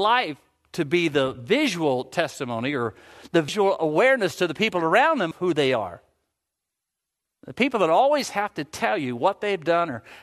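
At 3.48 s, just after "visual testimony or the", the speech jumps forward with a short smeared blip and resumes at "awareness to the people", with roughly a fifth of a second missing. At 5.31 s, after "the people around them", a smaller jump of about a tenth of a second lands on "who they are". These are compressed frames skipped: whole coded frames, each consistent with a 26 ms length, were never decoded, and overlapping neighbours soften each seam.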